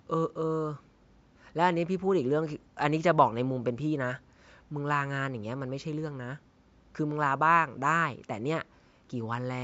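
No technical faults are audible.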